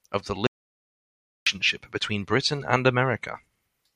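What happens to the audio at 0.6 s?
The input was likely lost while recording continued writing silence: an audio dropout to silence from 0.47 to 1.47 s, right after "of the", leaving about a second of dead silence.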